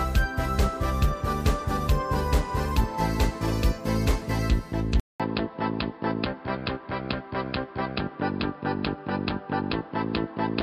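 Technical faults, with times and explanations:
5.00–10.62 s, input switched to a poorer device: after a 200 ms dropout the sound turns dull and boxy, with nothing above 5.2 kHz, a faint new noise floor well under the signal, and the level roughly unchanged. The input likely jumped to a narrower-band mic.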